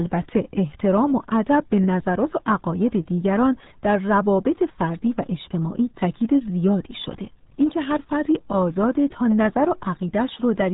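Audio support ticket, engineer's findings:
RealAudio 14.4 codec damage, whole clip, 0 to end. Speech muffled and gargly, hard cutoff at 3.8 kHz, heavy codec damage. Probable component: encoder path using RealAudio 1. Sound fits an 8 kbit/s dial-up-era speech coder. Coarse frame-by-frame modelling smears the voice. Not plain band-limiting: a telephone-style filter would be dull but clean, while here the gargle points to low-bitrate coding.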